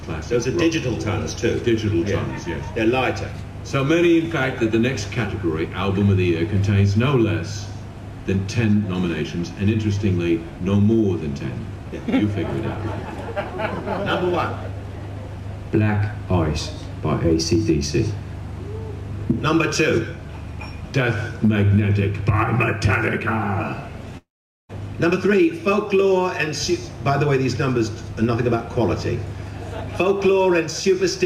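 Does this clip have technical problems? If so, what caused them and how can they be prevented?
Yes. There's a long network dropout from 24.17 to 24.71 s. The last bit of sound before the gap gets stretched into a buzzy tail that fades away. After that you get about 440 ms of plain silence, and then the audio picks up again with around half a second simply missing. That's likely the receiver papering over a run of packets that never arrived. A steadier connection, or a deeper jitter buffer with retransmission or forward error correction, would keep it from happening.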